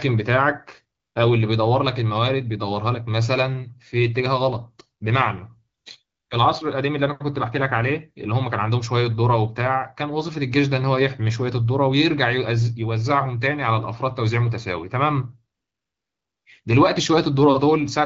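At 0.99 to 1.15 s, 5.77 to 5.85 s, 6.05 to 6.29 s and 15.55 to 16.45 s, the real background drops out and a smooth, steady hiss takes over. This is AMR comfort noise: the phone judged these pauses silent, stopped sending speech frames, and the receiver synthesised filler noise.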